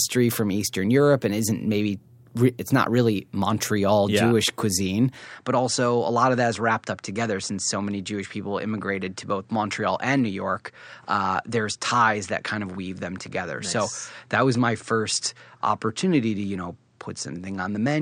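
At 5.26 s the speech abruptly loses its top end. Nothing remains above 9.3 kHz, the level drops by roughly 5 dB, and a new background noise appears about 50 dB below the speech. These changes last to the end, with no gap at the change. The likely cause is the input switching to a poorer device. A lone filter or codec change would narrow the band but would not also bring a different noise floor and level shift.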